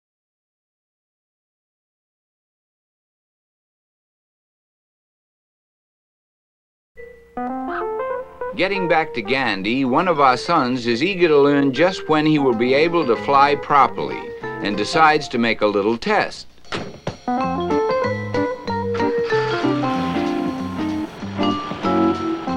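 GSM phone buzz appears from 19.90 to 21.18 s: a hard, raspy 217 Hz buzz, about 28 dB below the sound. A nearby 2G phone's transmit bursts are being rectified by the audio circuit.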